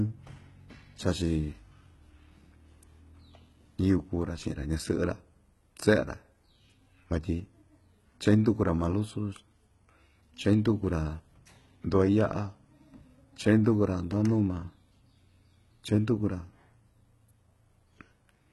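HE-AAC compression runs through the whole speech clip, and it is most likely the cause of the heavy damage heard. Nothing reaches above 11.8 kHz, and the treble below that limit sounds synthesized rather than recorded: the codec kept only the lower spectrum and rebuilt the top by copying lower bands upward under a coarse envelope. Harmonics fail to line up across that join, so s sounds come out gritty, metallic and lispy, which fits a very low bitrate around 16 kbps.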